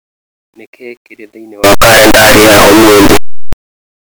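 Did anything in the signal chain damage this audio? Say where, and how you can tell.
Yes. From 1.64 to 3.53 s, just after "kĩrĩ thĩinĩ", the speech turns into loud, harsh distortion. Quiet stretches blare as loudly as the rest. This is likely a signed and unsigned mix-up at sample-format conversion. The flipped top bit turns each zero crossing into a full-range jump.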